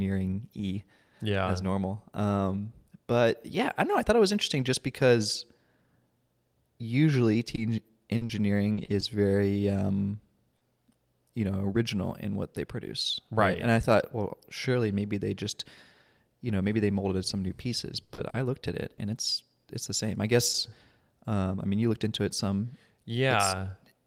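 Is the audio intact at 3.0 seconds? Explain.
Yes, the audio is intact at 3.0 seconds, with no dropout, click, distortion or other fault at that point.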